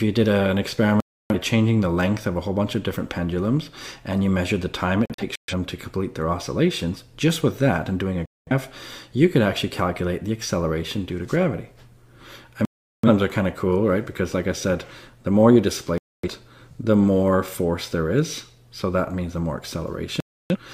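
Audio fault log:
1.00–1.35, 5.06–5.54, 8.26–8.52, 12.65–13.08, 15.98–16.28, 20.20–20.56 s: digital broadcast dropout. Sound cuts to silence for 0.21 to 0.38 s (scattered holes at 5.06 s) as the receiver muted failed frames.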